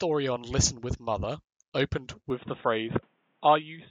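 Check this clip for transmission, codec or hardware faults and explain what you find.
One fault. From 2.3 s to the end, the speech turns dull and boxy with nothing above 3.8 kHz, and faint new background noise arrives seamlessly. The likely cause is the input switched to a poorer, narrower-band device.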